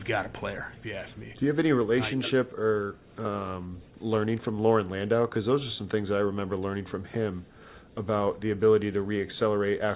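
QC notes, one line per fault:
No faults found.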